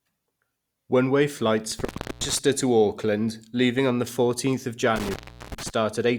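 A speech recording with intermittent contact, like a loose cable or plug. After "way flights" the sound cracks and drops out between 1.72 and 2.39 s, with an open stretch of about 320 ms. It happens again from 4.96 to 5.70 s, open for about 380 ms. Crackle marks the edges of each gap, and faint hiss remains inside it.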